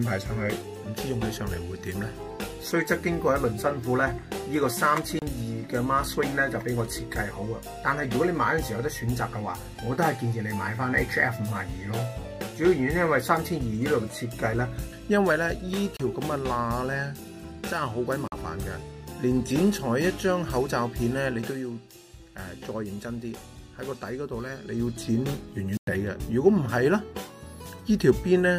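Bluetooth dropouts cut the audio to silence four times: at 5.19 to 5.22 s, 15.97 to 16.00 s, 18.28 to 18.32 s, and 25.77 to 25.88 s. The first two holes last 29 ms, the third 43.5 ms and the last 101.6 ms, which fits the loss of two, two, three and seven packets. After each gap the sound picks up further along as though it had kept playing, likely because packets failed to reach the headphones in time and were discarded. There are no fader-like level changes in the clip.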